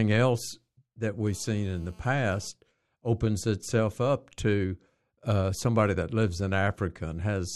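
A speech clip with GSM phone buzz from 1.26 to 2.48 s, between "else that" and "opens itself up to": a steady, raspy 217 Hz rasp about 32 dB below the speech, from a nearby phone on a call. Unlike mains hum, it is harsh, harmonic-rich and off the 50/60 Hz grid.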